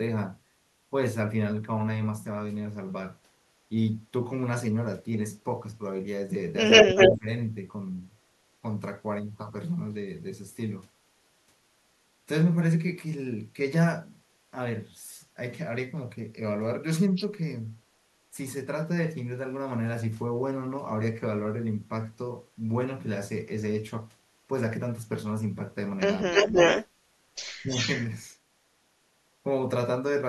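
A delayed copy of the speech trails the talker from 6.69 to 7.17 s, 139 ms behind and about 10 dB louder than the original. This echo leak most likely comes from a far-end loudspeaker whose echo canceller let its microphone pickup through. Overlapping it, from 6.84 to 7.26 s, the speech sags by about 15 dB over roughly 0.3 s. That is speech suppressed in double talk: the canceller, likely unable to separate the talker from the echo while both were active, turned both down. At 17.15 to 17.25 s a faint echo, well below the speech, returns 299 ms late. From 26.3 to 26.88 s a louder 299 ms echo, a few dB above the speech, coincides with a slight dip from 26.32 to 26.52 s. A sharp drop of about 20 dB then hits between 27.59 and 27.71 s, followed by a quieter 299 ms echo from 27.68 to 28.06 s.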